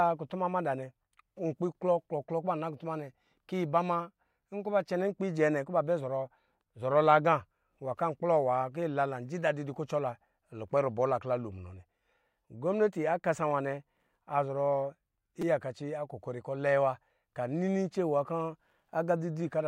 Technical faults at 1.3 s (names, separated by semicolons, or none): none